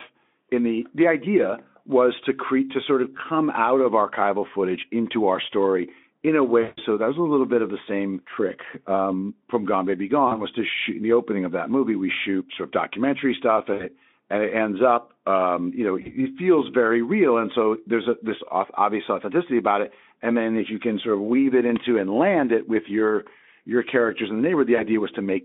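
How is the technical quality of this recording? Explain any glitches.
The recording has repeated dropouts from VoIP packet loss concealed by the speech codec. The line is narrowband, roughly 200 Hz to 3.6 kHz, with the Speex coding itself faint or inaudible. There are six gaps: 3.17 s (after "create to sort of"), 6.61–6.81 s (after "our story in a", about 160 ms missing, the longest), 10.27 s, 13.73 s, 16.01 s (before "feels very real") and 24.75 s. Each lost stretch of 20 to 160 ms is filled by the decoder repeating its last pitch and spectral shape at falling gain. That gap becomes a brief, smeared buzzy tone or coloured noise that fades. The voice stays weak or rough for a moment after each gap while the decoder recovers.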